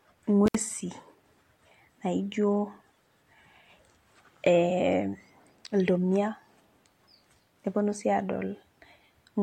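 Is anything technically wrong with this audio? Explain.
Yes. At about 0.47 s, barely half a second into the speech, there's an intermittent contact. A loose plug or cable briefly opens, so the sound cuts out for roughly 63 ms, crackling at the edges, and comes back by about 0.55 s.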